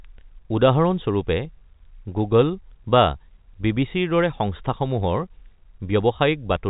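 Speech carried over G.711 A-law telephone coding, with the band ending near 3.8 kHz as that format allows, shows no technical fault anywhere in the clip.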